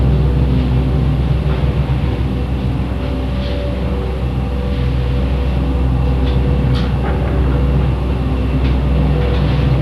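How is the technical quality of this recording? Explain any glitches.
The technical quality is compromised by audible compression damage running through the whole recording.

MP2 compression, throughout: the sound is dull and carries a gurgling, granular roughness, with nothing above 12.2 kHz. This is likely MPEG Layer II coding at a starved bitrate, one that fits roughly 80 kbps. The encoder divides the spectrum into 32 sub-bands, shuts off the upper ones when bits run short, and coarsely quantises the remainder, so bands flicker in and out.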